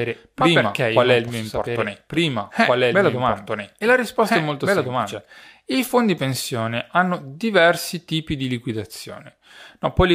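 A doubled audio track runs from the start to 5.16 s. An equally loud, full-band copy trails about one and a half seconds behind, likely from a second, slower capture path, then stops abruptly.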